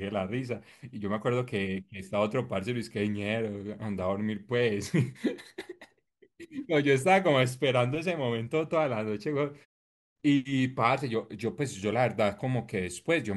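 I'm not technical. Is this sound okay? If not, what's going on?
Yes, the recording is technically sound, and the quiet moments between phrases go fully silent before the speech returns on time, which is normal behaviour for this kind of setup.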